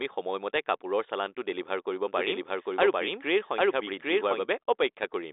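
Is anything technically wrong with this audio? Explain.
Yes. A doubled audio track runs from 2.07 to 4.45 s. The speech is most likely being captured twice, with a slower path adding a second copy about 0.7 s behind at roughly the same level. That copy has no decay or room colour, and it starts and stops abruptly. The telephone band, with nothing above about 3.8 kHz, fits the G.726 line working as intended.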